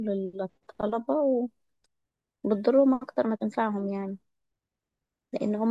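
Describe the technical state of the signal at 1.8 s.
At 1.8 s the speech signal is intact, with no dropout, distortion, glitch or other technical fault at that moment.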